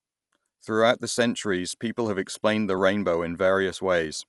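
Heavy perceptual coding, likely Dolby Digital compression at a low rate, runs through the whole speech clip. Starved of bits, the encoder narrows the band and gives many frequency lines no mantissa data, so the decoder fills those lines with noise. Nothing remains above 11.5 kHz, leaving the speech dull and closed-in, and a rough, fluttering grain clings to voiced tones. The damage is plainly audible and fits a bitrate around 64 kbps.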